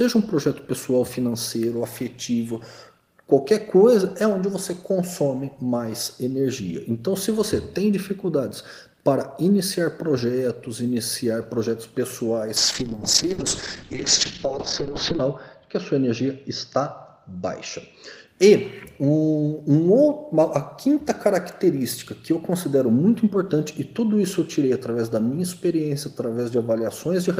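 A call bitrate drop from 12.57 to 18.33 s leaves the audio rough and muffled, top end cut near 8 kHz, consistent with the encoder falling from about 32 to 7 kbps.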